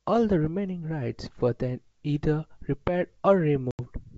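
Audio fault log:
3.71–3.80 s, packet loss on an ADPCM call: an 80 ms hard-edged silence follows "were then either repaired"; the decoder's mismatched predictor and step size make the speech return unsteadily before settling.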